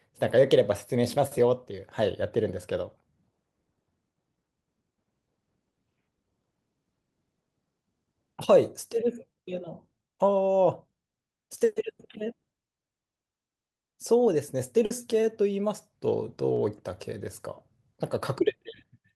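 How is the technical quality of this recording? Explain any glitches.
The recording has two network glitches, both packet-loss events, one longer and one brief.

From 14.85 to 14.92 s there is a burst of packet loss. Packets were lost or arrived too late, so the receiver stretched the last sound for about 50 ms, fading it, then jumped ahead, skipping roughly 40 ms. The audible fade and the skip distinguish it from a brief smear.

At 16.54 to 16.58 s comes a short concealed packet loss: about 20 ms was missing, and the decoder patched the hole by extending the preceding sound and blending back in. It is heard as a quick wobble rather than a held, fading tone.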